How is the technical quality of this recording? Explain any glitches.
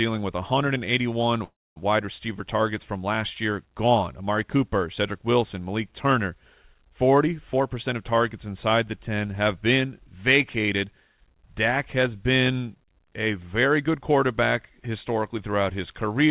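The clip is speech carried over a call link. Nothing is heard above 4 kHz, which fits a narrowband G.711 A-law codec. Two glitches stand out.

Call audio freeze, 1.44 to 1.79 s: the sound stalls, holds briefly as a fading tail, and then falls into about 250 ms of silence before resuming. The likely cause is packets held up in transit while the jitter buffer ran dry. The receiver stretched out the last sound and then waited. When the packets arrived, playback continued from where it had stopped. Nothing is lost, but roughly 320 ms of gap has been inserted, pushing everything after it later by that amount.

Jitter buffer speed-up, 7.53 to 11.46 s: the speech runs noticeably quicker, at about 108% of normal speed, with its pitch unchanged, so this stretch sounds hurried. The buffer had built up more audio than it aims to hold. To cut that surplus, the receiver repeatedly removed short slices, each one or a few pitch periods long, taking out about 0.3 s in total over the span.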